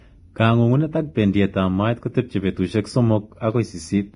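A speech clip, and the whole thing is heavily coded: nothing survives above 10.5 kHz, and the treble that is left sounds hissy and grainy, with a rough edge on the tonal parts and smeared attacks. That's most likely Vorbis compression at low quality, where the high band gets quantised so coarsely that real detail turns into noise of similar energy. The damage level points to a bitrate somewhere around 29 kbps.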